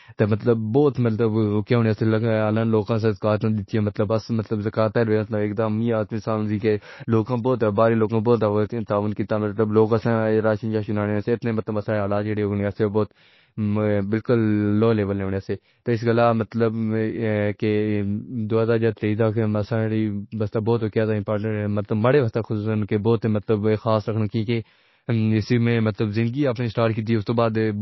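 From start to finish the speech carries MP3 compression damage, and it's plainly audible. Nothing comes through above about 5.8 kHz, so the s sounds lose their top and turn dull and metallic, while quieter detail swirls in and out as the encoder drops weak frequency lines frame by frame. That watery texture and the hard treble ceiling fit a very low bitrate, somewhere around 24 kbps, as the likely cause.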